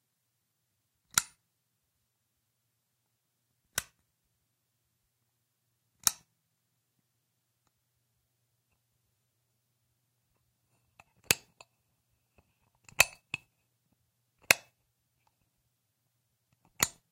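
No technical faults can be heard anywhere in this recording.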